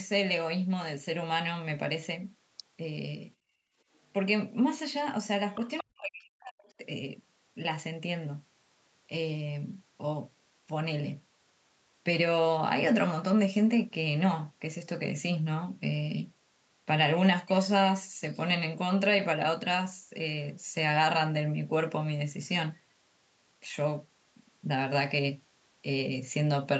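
From 3.36 to 3.77 s the background is gated by the echo canceller: while its loudspeaker was active, the canceller pulled the microphone gain down by about 17 dB for roughly 400 ms, so the room tone sinks toward silence and then returns. On a waveform the noise floor between speech shrinks to a flat, thin band for that stretch. On a spectrogram the faint broadband texture fades across all frequencies and snaps back at the release.

At 5.52 to 5.83 s a faint second voice is heard, most likely the other side's voice leaking through. The far end's loudspeaker sound reached the microphone and was not fully cancelled, so it sits at around 15 dB below the talker. A spectrogram shows a separate, weaker set of harmonic stripes that don't follow the talker's pitch. A second, much fainter scrap appears at 6.65 to 6.73 s, roughly 35 dB down, as a barely visible smudge.

From 5.81 to 6.83 s the talker's speech is suppressed in double talk, likely because the canceller could not tell the near voice from the overlapping far-end echo and attenuated everything. 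For about a second the voice drops in pieces, by as much as 40 dB at its deepest, and sounds swallowed and chopped. The waveform envelope collapses in ragged notches. On a spectrogram the harmonics break into gaps below the call path's 8 kHz ceiling.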